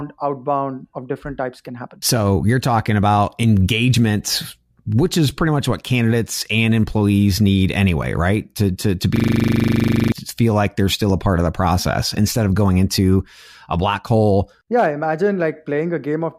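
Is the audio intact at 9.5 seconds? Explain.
No, 9.5 s sits inside a system hang loop from 9.16 to 10.12 s, just after "to to". The computer or driver froze while the hardware kept replaying a 40 ms buffer, giving a steady 25 Hz buzz and losing about a second before "like they're still a".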